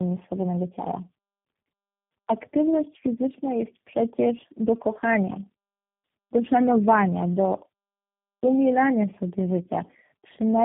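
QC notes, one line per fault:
Throughout: tandem speech coding. Speech is rough, muffled and warbly, with nothing above 3.5 kHz, and it sounds like four speech coders in a row, harsher than any single codec would leave it.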